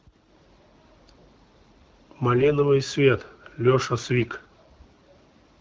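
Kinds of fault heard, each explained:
AMR bit errors: Flipped bits in the less protected parts of the hit AMR frames slip past the checksum, so the decoder rebuilds the voice from misplaced excitation pulses and skewed pitch, gain and spectral values. Here the speech turns hoarse and gargly from 2.36 to 2.51 s, a span with four hit frames, and more harshly from 4.20 to 4.26 s. Pitch and level roughly hold, unlike packet loss, which leaves gaps or smeared repeats.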